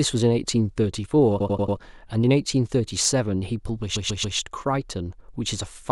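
Hard clipping first appears at 0.26 s, where a speech peak meets the converter's limit with little or no overdrive (about 0 dB) and its top is cut flat, giving a short crackle. A stutter follows from 1.40 to 1.77 s: repeated frames replay the same 92.9 ms stretch four extra times, adding 0.37 s. The compressed data was written or sent more than once, so the same moment plays again. Clipping returns at 3.05 s, about 4 dB over, as a sharper tick of harsh high harmonics. From 3.95 to 4.37 s a 139.3 ms block plays three extra times, adding 0.42 s, which points to a run of several frames. A last clipped peak, about 1 dB over, crackles at 5.90 s. The two faults differ clearly: clipping changes the tone of a loud moment but keeps the timing, while the repeats leave the tone clean but loop identical sound and lengthen the speech.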